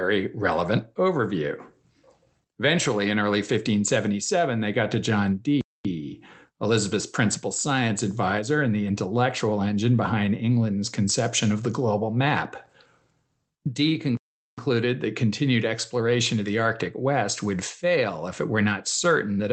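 At 5.61 s the speech cuts out abruptly in mid-flow. Silence lasts about 0.24 s, then the sound resumes. A longer gap follows at 14.17 s, lasting about 0.41 s, before the speech picks up again on "that continued exploration of". Both dropouts are playback stalls. The player likely ran short of data or was held up, so its output went silent until it recovered. The Opus call coding stays audible throughout as band-limited audio.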